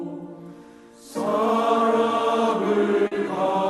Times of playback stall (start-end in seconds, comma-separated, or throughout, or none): none